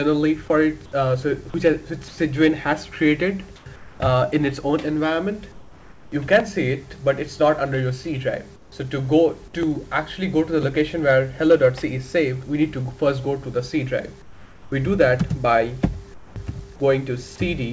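In the pauses at 2.08–2.18, 3.56–3.66, 3.76–4.00, 5.52–6.12, 8.56–8.72, 14.22–14.72 and 16.14–16.36 s, the background turns flat and featureless and drops about 3 to 6 dB. This is comfort noise in place of the background, likely from discontinuous transmission synthesising filler noise. The band stops at 8 kHz, consistent with a G.722 call path.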